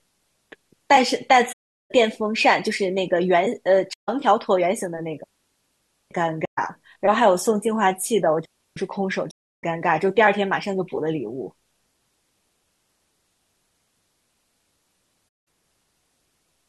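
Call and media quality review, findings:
AAC frame loss with muting: soft-edged gaps at 1.52–1.91 s, 3.93–4.09 s, 6.45–6.59 s, 9.31–9.63 s and 15.27–15.47 s. Decoder zeroes the lost spectra. Window overlap fades the audio in and out, and gap lengths fit 1024-sample frames at 48 kHz.

Digital wireless dropout: clean near-silent holes at 5.24–6.11 s (0.87 s) and 8.45–8.77 s (0.31 s). Receiver mutes with a very short fade on data loss. No noise burst either side.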